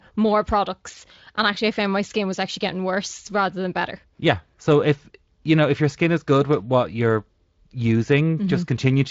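The speech comes through a Speex-coded path with only the light coarseness that codec leaves at a fairly generous setting and no content above 7.6 kHz, and no fault can be heard anywhere in it.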